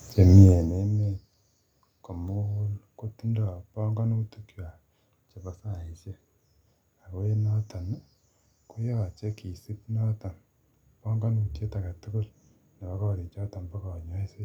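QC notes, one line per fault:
Nothing stood out on listening to this speech recording.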